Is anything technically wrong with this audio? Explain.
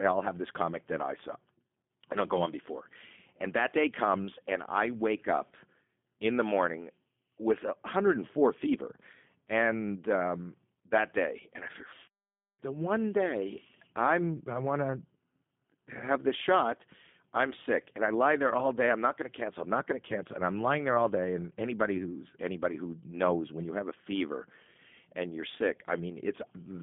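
Yes. Throughout, the speech carries G.729 codec damage: it is rebuilt from a vocal-tract filter, pitch predictor and sparse pulses, which fits an 8 kbit/s rate. Content sits between 150 Hz and 3.5 kHz, nothing above 3.6 kHz, giving a plainly rough, synthetic telephone sound.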